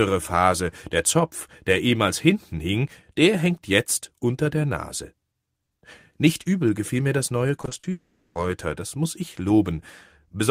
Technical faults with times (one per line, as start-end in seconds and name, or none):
7.61-7.85 repeated packet loss (robotic sound)
7.91-8.37 long network dropout